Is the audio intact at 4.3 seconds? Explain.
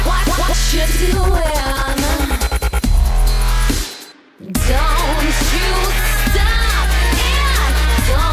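Yes, the music plays through 4.3 seconds intact, with no fault audible at that moment.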